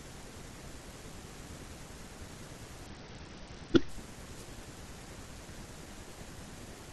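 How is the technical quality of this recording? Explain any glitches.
The recording has two glitches, both short and close together in the middle of the speech.

From 2.86 to 3.89 s there is a Bluetooth SBC bit pool drop. The link got congested, so the phone cut the bits per frame. The top sub-bands lost their share. The rest were quantised coarsely. The treble goes dull and a gritty noise rises for about a second. The sound points to a fall from a bit pool near 28 to about 8, roughly 72 kbps.

From 4.36 to 4.45 s there is a wireless microphone noise hit. Reflections briefly cancelled the FM radio signal. The receiver's own noise came up as the signal faded. It is heard as a quick swish of static over the speech. It lasts under a tenth of a second, then clears.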